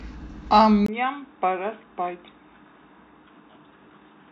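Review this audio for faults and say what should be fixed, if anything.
At 0.86 s the speech turns dull and boxy and stays that way to the end, after a brief 20 ms gap at the changeover. A faint new background noise, well below the speech, appears, while the loudness stays about the same. The input likely switched to a poorer device, such as another microphone or a headset's call profile. That path passes nothing above 3.8 kHz and brings its own tone and noise. To prevent it, lock the recording input to one device and disable automatic switching for the session.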